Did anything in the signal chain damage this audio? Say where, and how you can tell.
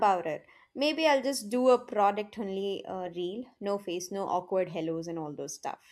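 No, nothing in the signal chain audibly damaged this speech recording. Listening across the whole clip turns up nothing that points to a problem at any stage between capture and playback.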